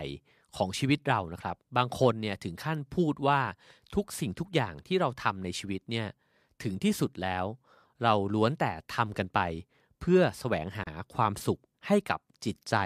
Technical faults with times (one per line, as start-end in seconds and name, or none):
10.83-10.87 gap at a join of encoded pieces